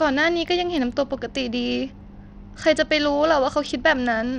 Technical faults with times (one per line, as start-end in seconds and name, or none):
0.00-4.38 Bluetooth SBC compression